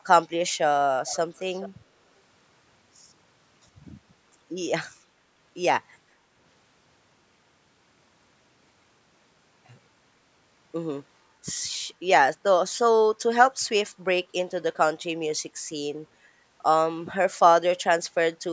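Echo leak: one side's echo canceller likely let its own loudspeaker sound, caught by its microphone, pass back into the call. From 1.07 to 1.18 s and from 1.37 to 1.69 s, a faint copy of the speech trails 429 ms late, about 20 dB below it.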